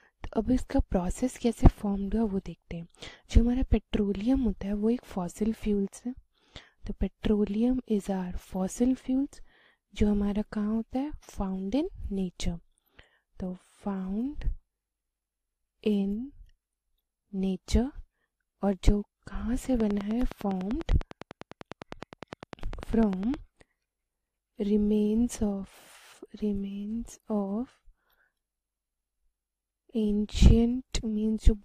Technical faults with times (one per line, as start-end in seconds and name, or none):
19.80-23.35 train of clicks